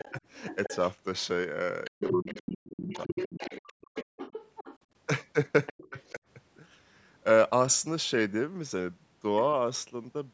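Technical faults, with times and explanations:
0.00–0.91 s, 1.84–4.78 s and 5.66–6.15 s: other side's voice leaking through. A second voice sits under the speech, around 15 dB below it in the first and last stretches and closer, about 10 dB down, in the long middle one. This is likely loudspeaker echo that the call's echo canceller failed to fully remove from the microphone signal, so the far end's voice rides along with the talker's.
1.90–3.84 s and 5.71–6.21 s: speech suppressed in double talk. The talker's voice dips sharply, falling by as much as roughly 40 dB, for about a second in total in the first span and about a fifth of a second in the second. Both sides were talking at once, and the echo canceller likely could not tell its own talker from the echo, so it pulled both down together.
4.12–4.17 s: background gated by the echo canceller. The room sound drops out for a brief 50 ms, falling by about 40 dB before returning. 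While the loudspeaker was playing, the canceller clamped the microphone hard, and the ambience came back as soon as it released. The call's microphone processing also limits the audio to nothing above 8 kHz.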